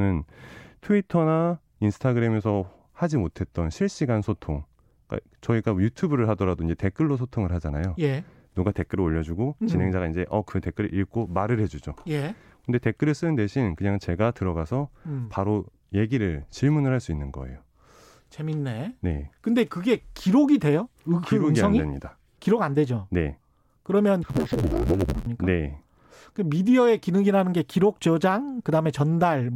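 Speech, with interleaved audio read as planar from 24.23 to 25.27 s: short 11.61 ms blocks, which fits 512-sample blocks, give a dull, robotic buzz at 86.1 Hz, seen as regular vertical striations on a spectrogram.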